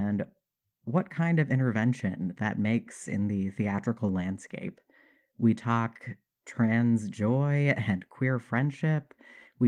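No technical faults occur in the speech, which comes through Opus voice compression in its usual way.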